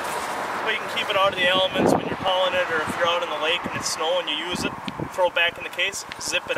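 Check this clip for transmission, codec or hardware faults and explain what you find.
Two faults turn up, one tiny skip and one burst of clicking near the end.

At about 2.28 s there's an overlap between stream segments. Two segments' timestamps overlapped, so the player trimmed away audio that wasn't actually duplicated. Only about 6 ms goes missing, but the waveform jumps and you hear a tiny skip.

From 5.14 s to 6.57 s there's a train of clicks, roughly fifteen of them at around 9.2 per second, unevenly spaced and about as loud as the sound itself. The ticking sits right on top of the audio, and the likely cause is interference from nearby equipment or a faulty connection.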